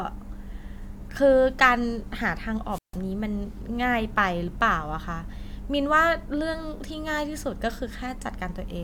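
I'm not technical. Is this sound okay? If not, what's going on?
No. At about 2.70 seconds the sound briefly cuts out. This is a wireless microphone squelch dropout. The radio signal from the wireless mic got too weak for a moment. The receiver then muted itself so it wouldn't play loud static. You may hear a quick rise of hiss, then near silence for about 0.15 seconds. The speech comes back by about 2.98 seconds. The whole glitch lasts under a third of a second.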